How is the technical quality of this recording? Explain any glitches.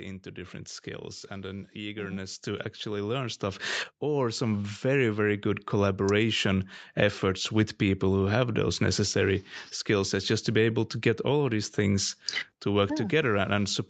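The recording has one clear technical fault, a slow gain swell early in the speech, heard over a call-style chain whose content stops at about 8 kHz.

Automatic gain rising, from 1.28 s to 5.76 s, just after "into different skills": the automatic gain control judged the input too quiet and kept pushing its gain upward, by about 14 dB over roughly four and a half seconds. Because the gain acts on everything, the voice and the background noise swell louder together, a gradual creep in level rather than a sudden jump.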